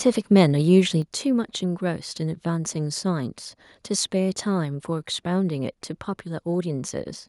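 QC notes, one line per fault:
1.02 s, microphone volume stepped down: the speech and the background behind it drop abruptly by about 6 dB and stay at that lower level. This is likely the call software judging the input too hot and cutting the microphone's volume in a single step.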